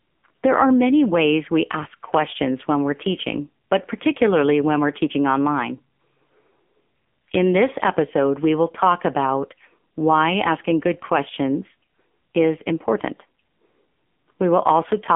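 Speech runs through an AMR narrowband mobile codec for the whole clip. Nothing above 3.5 kHz survives, and the low end thins below about 200 Hz, giving the boxed-in 200–3400 Hz phone-line band. A plain telephone band-pass filter would only narrow the sound. Here the voice is rebuilt from a pulse-driven vocal-tract model and comes out heavily buzzy and synthetic, damage that fits one of AMR-NB's lower modes, around 6.7 kbps.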